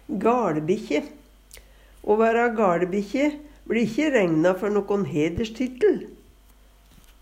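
A loud pop lands at 5.38 to 5.40 s, a single sharp burst lasting only a few hundredths of a second and peaking a few decibels above the surrounding audio. The likely cause is a sudden voltage step or spike, from a plug being seated, a switch, a static discharge or a driver glitch, entering the signal path. Later stages round the pulse into a short thump, while the underlying sound carries on beneath it uninterrupted.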